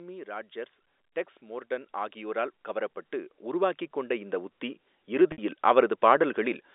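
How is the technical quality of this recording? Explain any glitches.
The recording has two faults, heard through a telephone-band channel whose G.711 coding limits the sound to roughly 300 Hz to 3.7 kHz.

Automatic gain rising starts at 1.4 s, just after "ராட்ஜர்ஸ் டெக்ஸ்", and continues to 6.68 s. The gain control judged the input too quiet and kept raising its gain, about 16 dB in all, so the voice and the background noise swell together slowly rather than jumping.

Packet loss with pitch repetition occurs from 5.32 to 5.38 s. About 60 ms of audio is missing, which fits three lost 20 ms packets. The receiver fills the gap by repeating the last pitch period, which gives a brief held, buzzy tone that fades before the speech cross-fades back in.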